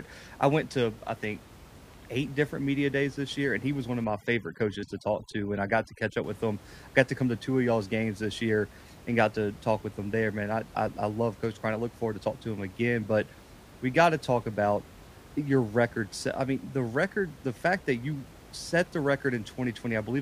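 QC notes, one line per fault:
4.04–6.24 s, overdone noise removal: a noise reduction stage set far too aggressively clamps individual frequency bands whenever they sit near its noise estimate, so the room noise, about 22 dB below the speech, drops and breaks up into twinkling specks, and the quieter parts of the voice vanish.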